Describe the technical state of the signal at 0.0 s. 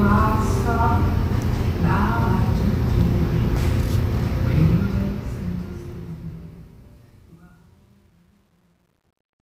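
At 0.0 s the signal is intact, with no fault present.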